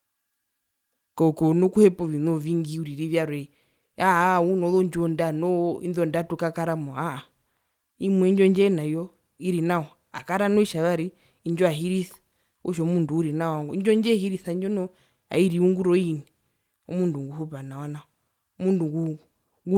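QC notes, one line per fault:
No faults were found in the speech. Nothing in the clip needs a QC note.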